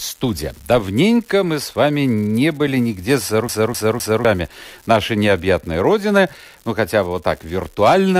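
A marginal data line leaves one bit unreliable, so it flips in a random share of samples, each flip adding a spike of identical size. This unreliable data bit yields a steady crackling fizz running through the whole speech clip, audible even in pauses.

From 3.48 to 4.25 s, a scratch sends the laser back one track on each disc turn: the CD is stuck on one turn. The same 0.26 s segment plays three times, with a brief mute at each jump, producing a fast, even skipping stutter.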